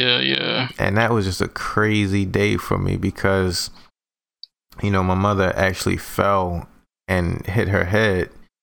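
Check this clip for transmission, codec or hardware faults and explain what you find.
No transmission, codec or hardware faults can be heard anywhere in the recording; the speech signal stays continuous and stable in level, timing and tone throughout.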